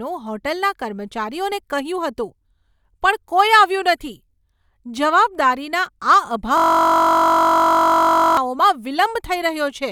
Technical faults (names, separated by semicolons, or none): system hang loop